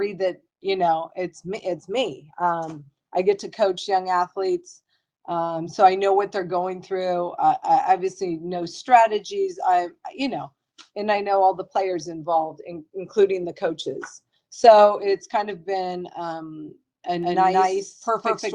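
The audio picks up a doubled audio track from 17.23 s to the end: an equally loud copy trailing about 200 ms behind, likely from a second, slower capture path or an out-of-step edit.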